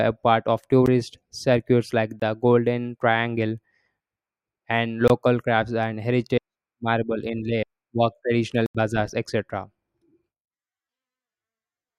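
Blocks of digital silence cut the speech at 0.86 s, 2.20 to 2.22 s, 5.08 to 5.10 s and 8.66 to 8.75 s. Buffers likely went unfilled, so the audio dropped out. The 21 ms gaps fit a 1024-sample buffer. The 85 ms one is an audible hole.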